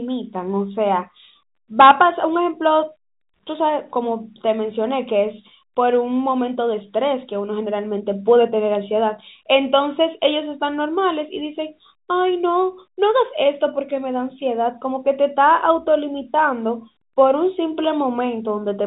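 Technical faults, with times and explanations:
No technical faults are present.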